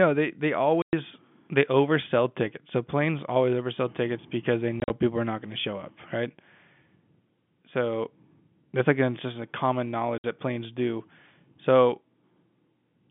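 Three abrupt dropouts chop this telephone-band speech clip, each a hard-edged hole of dead silence: at 0.82 s for 110 ms between "they they" and "they oversell tickets", around 4.8 to 4.9 s as 70 ms of gaps scattered across 100 ms (longest 40 ms) after "oversell tickets because they", and at 10.18 s for 60 ms before "that planes do". This is packet loss filled with silence. The receiver played nothing where packets went missing, and the gap lengths fit 10 ms packets.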